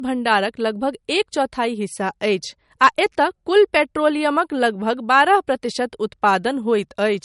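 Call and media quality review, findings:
Speech band-limited throughout, nothing above 11.2 kHz. Symptom: dull top end despite a high-rate file. Likely low-bitrate audio saved at a high bitrate. Cut-off points to an early MP3 pass near 48 kbit/s. Later re-encode cannot restore removed detail.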